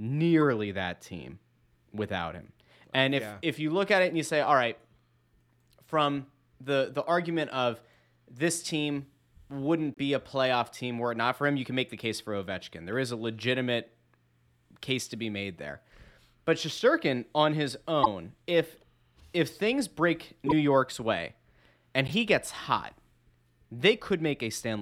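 Corrupt frames decoded at 9.94, 18.03, 20.46 and 22.08 s: the decoder played damaged compressed frames, misplacing energy for a few frames and causing blips, faint at first, loudest near 18.03 s.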